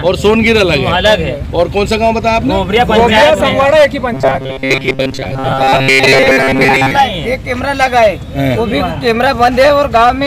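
From about 4.14 to 6.91 s the sound goes robotic, with repeated short buffers: it locks into a rigid metallic buzz near 133 Hz. That's likely the playback looping a roughly 7.5 ms chunk while fresh audio arrives too slowly, so most of the real material gets skipped.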